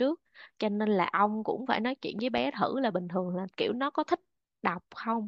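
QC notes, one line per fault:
2.19–2.40 s, loud pop: two sharp pops in quick succession, peaking around 5 dB above the speech, while the speech carries on underneath without a gap. This is likely a sudden voltage step or pulse, from a plug, switch, static discharge or driver glitch, added to the signal and briefly shaped by the following circuitry. Unlike a dropout or edit click, nothing is removed or cut. The pops simply sit on top of the continuing audio.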